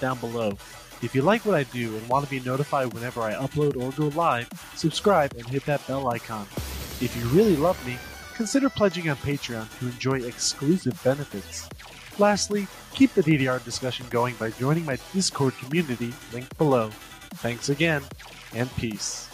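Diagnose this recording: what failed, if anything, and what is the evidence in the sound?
No fault found in this recording.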